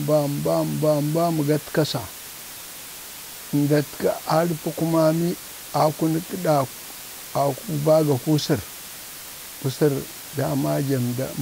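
From the first moment to the last, the speech sits on a constant, even hiss: a case of low bit depth with dither. The samples have been rounded to only 5 bits, and random dither was added before rounding, so the coarse quantisation error comes out as steady broadband noise rather than grainy distortion. That noise floor lies only around 15 dB below the speech, high enough that the hiss is plainly audible under every phrase and in every pause.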